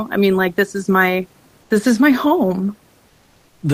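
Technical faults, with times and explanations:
1.62 to 1.70 s, comfort noise in place of the background: right after "like this is my" and before "this is my", the real room hiss, sitting about 38 dB under the speech, gets swapped for about 80 ms of flat, featureless noise roughly 5 dB quieter, so the background briefly goes smooth and dips. That's likely discontinuous transmission, where the sender goes quiet in a pause and the receiver fills the gap with synthetic noise.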